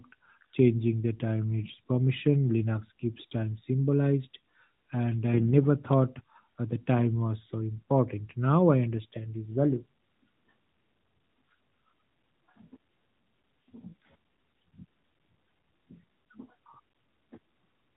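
At 1.64 to 1.78 s, 5.34 to 5.52 s and 16.90 to 17.02 s, AMR bit errors turn the sound hoarse, scratchy and gargly. Flipped bits in the weakly protected parts of each frame misplace the excitation pulses and skew fine pitch, gain and spectral values. Unlike lost frames, nothing drops out or smooths over. Pitch and level roughly hold through the narrowband band-limit of the 12.2 kbps stream. Only the texture corrupts, consistent with error rates of several percent.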